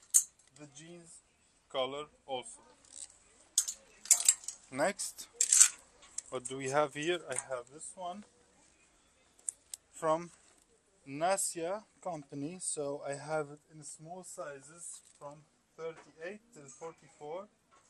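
Throughout, the sound is dull and gurgling, with granular distortion. This is likely MP2 compression, consistent with about 80 kbps, switching off upper sub-bands.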